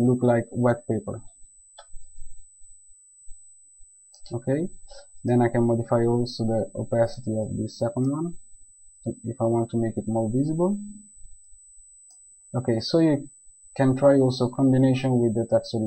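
A thin, steady USB whine at 8 kHz runs beneath the sound from start to finish, sitting roughly 30 dB below it. The pitch matches the 125 microsecond microframe rate of a high-speed USB bus, whose bursts of current draw leak through shared power or ground into the audio path. Mains hum sits low at 50 or 60 Hz and its harmonics, and switching-supply noise tends to wander. This tone stays locked at one high pitch.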